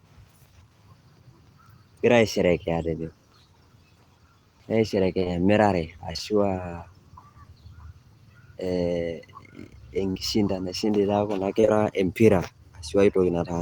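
Short concealed packet loss strikes at 5.19, 5.23, 6.13, 6.17, 10.11, 11.61 and 11.65 s, each losing about 20 ms (40 ms at 10.11 s). The receiver extends the preceding sound, so each is a brief smear or wobble, not a silent dropout or sharp click.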